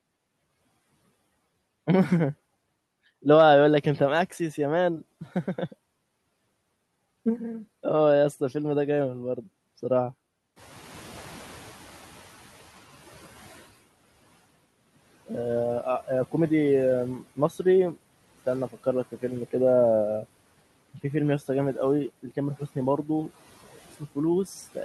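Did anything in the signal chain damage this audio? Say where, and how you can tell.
Yes, in call processing: the noise suppressor catching up. When the room noise jumps by about 14 dB around 10.5 s, it passes through under-reduced from 10.56 to 12.94 s, then sinks about 12 dB over 2.38 s. On a spectrogram the broadband noise floor visibly fades as the suppressor's estimate adapts.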